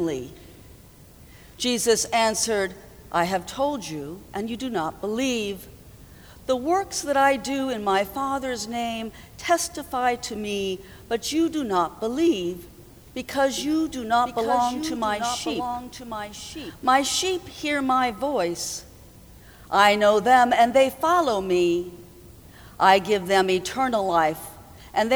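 The audio carries a doubled audio track between 13.58 and 16.88 s: a second, full-band copy of the same sound runs roughly one second behind the original, about 5 dB quieter. The copy has no decay or room colouring, so it is not reflection, and it switches on and off abruptly at both ends of the span. The likely cause is the signal being captured a second time through a slower path, or an edit leaving two copies out of step.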